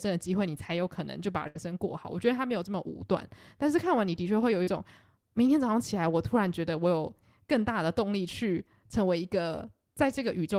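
At 1.47 to 1.58 s, a burst of packet loss fills 75 ms by continuing the last sound and fading it out, then resumes 80 ms further on. The spectrogram shows a smeared, decaying stretch and then an abrupt jump.

At 4.63 to 4.70 s, short concealed packet loss rebuilds 40 ms from the preceding sound, heard as a brief smear. It shows as blurred, flattened detail before the real waveform returns.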